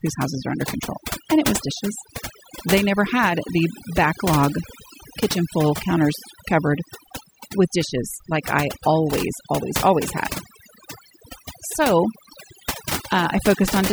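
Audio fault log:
throughout, overdone noise removal: the noise reduction on this speech was set far too aggressively, so any frequency band sitting close to the estimated noise floor gets pulled right down or shut off entirely. The gaps between phrases fall to near silence scattered with twinkling, chirpy specks where isolated bands flicker back on, and the softer parts of the voice are stripped away along with the noise.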